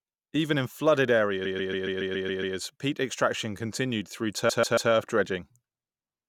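It's a speech clip with repeated frames in two places. From 1.44 to 2.56 s, right after "in flooded", a 139 ms chunk plays eight extra times, and from 4.48 to 4.90 s, after "peat extraction continued through", it loops three more times, adding about 1.1 s and 0.4 s of stutter.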